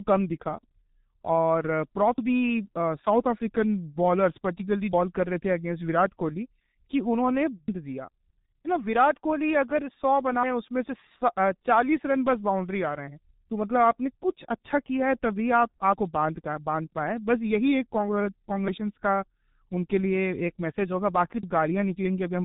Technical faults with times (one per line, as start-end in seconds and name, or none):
0.00-22.44 G.723.1 codec